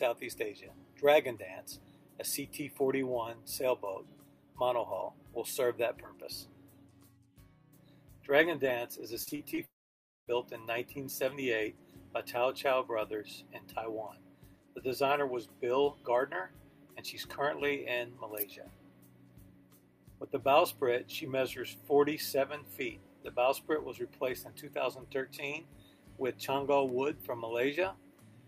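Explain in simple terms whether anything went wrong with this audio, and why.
Yes, a few things went wrong, and they're all over in a second or two.

From 9.23 to 9.59 s there's repeated packet loss, the robotic-sound kind. Four small chunks of audio went missing in quick succession, the longest about 35 ms. Each time, the receiver papered over the hole by stretching out the last bit of sound it had. About a third of that short stretch is patched-in filler, so it comes across as choppy and a bit mechanical rather than smooth.

Right after, from 9.65 to 10.29 s, there's a long network dropout. The sound hangs on for a moment as a fading continuation, then goes quiet for roughly half a second before picking up again. The most likely explanation is that the connection stalled and nothing arrived for that whole stretch. About 0.6 s of the original audio simply never played, so whatever was there is gone, not delayed.

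At 26.89 s there's a bit error spike, a single sharp tick. One bit got flipped in the data, hitting two samples in a row. That made the waveform jump suddenly and snap straight back. It's a digital glitch, not anything in the recorded sound itself, which is why it's so brief and doesn't match what's going on around it.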